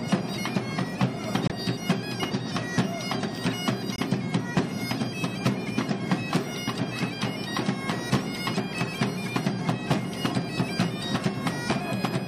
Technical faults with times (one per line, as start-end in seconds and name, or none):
1.48-1.52 corrupt frame muted
3.96-4.00 corrupt frame muted